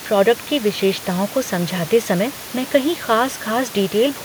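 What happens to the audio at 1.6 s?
Nothing goes wrong at 1.6 s: the speech carries on intact there, with only the room's own background noise sitting about 20 dB below it.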